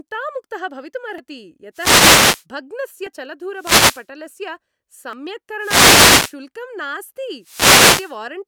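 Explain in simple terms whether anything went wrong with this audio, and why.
At 1.18, 3.07, 5.13 and 6.08 s the speech jumps ahead, losing a brief sliver each time. This is likely a dropped buffer (overrun): the recorder fell behind and lost audio.

From 1.73 to 2.45, 3.54 to 4.07, 5.58 to 6.36 and 7.40 to 8.18 s, bursts of static swish over the speech. These are wireless microphone noise hits, where the radio signal briefly faded.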